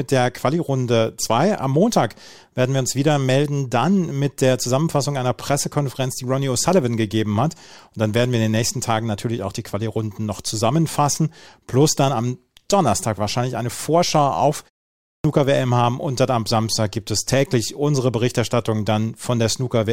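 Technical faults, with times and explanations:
14.97–15.24 s, clipped start after a pause: after a pause of about 0.36 s, the output device had dropped into an idle state and needed time to wake and lock again before it passed audio. The first 274 ms of the speech that resumed here never reached the output, so the phrase begins abruptly out of silence with its opening sounds missing.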